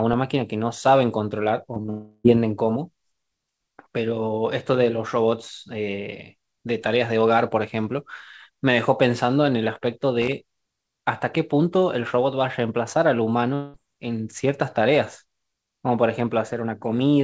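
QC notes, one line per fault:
1.74, 1.82 and 1.86 s: short concealed packet loss. Three 20 ms gaps were bridged by stretching the preceding sound, heard as a quick smear and wobble. On a spectrogram, harmonics smear flat for an instant; the waveform shows repeated cycles blending back.
1.90 to 2.26 s and 13.54 to 13.76 s: long network dropout, likely. Roughly 340 ms and 200 ms of audio are replaced by a continued buzz or hiss that fades, never reaching silence. The spectrogram shows a frozen, decaying band, and the waveform shows a repetitive, shrinking envelope.
10.22 to 10.33 s: loose connector crackle. A contact rapidly making and breaking chops the signal into an irregular scratchy burst. The waveform shows jagged spikes and dropouts; the spectrogram shows broadband vertical streaks reaching the 8 kHz ceiling of the call band.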